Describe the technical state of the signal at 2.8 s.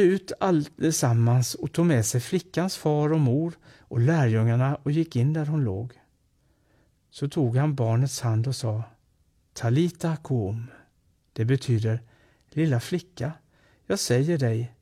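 At 2.8 s the speech signal is intact, with no audible fault at that moment.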